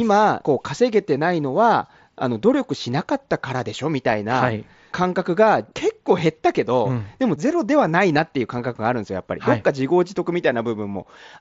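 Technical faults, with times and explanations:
No technical faults can be heard in this speech.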